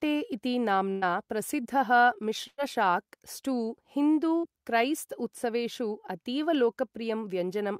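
At 0.91 s there's a burst of packet loss. About 60 ms of speech never arrived, so the receiver stretched the last sound into a fading fill lasting roughly 0.1 s, and the speech picks up further along. From 1.57 to 2.05 s a jitter buffer speed-up kicks in. Tiny pitch-period slices get trimmed over and over, so the speech runs about 9% fast at unchanged pitch and sounds rushed. Another packet-loss burst hits at 2.47 s, again with about 0.1 s of concealment, but this time it drops into about 40 ms of silence before the speech resumes. Right after "स्टू हिन्दु", at 4.38 s, a shorter burst gives about 50 ms of fill over a 60 ms hole. A final speed-up from 7.03 to 7.30 s pushes things about 16% fast, and the hurry is stronger there.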